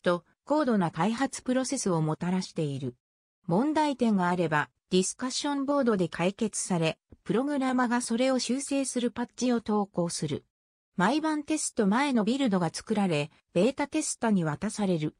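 No technical faults are audible anywhere in this audio.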